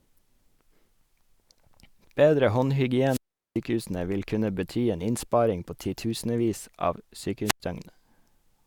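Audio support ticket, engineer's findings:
Wireless microphone squelch dropout, twice in the speech. 3.07 to 3.59 s: hiss swells, then roughly 0.39 s of near silence before "vil kunne bety en" comes back. 7.45 to 7.60 s, right after "innsparing på titusenvis av": shorter, about 0.09 s hole. Component: analogue FM radio link. Mechanism: RF level sags, receiver squelch gates the output, opens again when signal recovers. Check antenna placement and line of sight.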